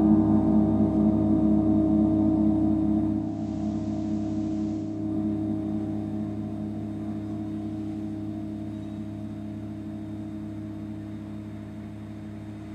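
From 3.09 to 5.15 s the receiver shows digital radio blending to analogue: the digital stream drops out and a 440 ms cross-fade hands over to the FM broadcast, then back. During that stretch the level falls about 2 dB, and hiss sits roughly 30 dB under the signal.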